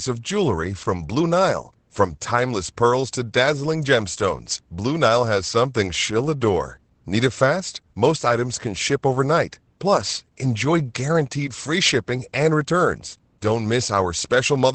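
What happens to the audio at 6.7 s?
Opus voice compression runs through the whole clip, including 6.7 s. It fits about 12 kbps SILK coding, which cuts everything above 8.6 kHz and coarsely codes the excitation. Unlike a plain low-pass, the speech also sounds hoarse and slightly robotic.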